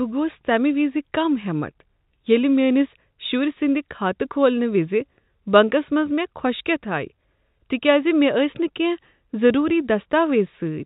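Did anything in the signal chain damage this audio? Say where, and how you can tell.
Yes, at the network stage: packet loss with last packet repeated at 9.69 s. A 10 ms gap, likely a single dropped packet, got filled by replaying the previous audio, so there's a brief blip.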